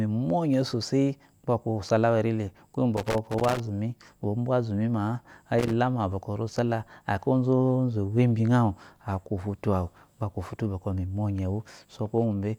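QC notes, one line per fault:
2.97–3.60 s and 5.59–5.73 s: loose connector crackle. Irregular bursts of scratchy crackle. A bad contact keeps breaking, chopping the speech.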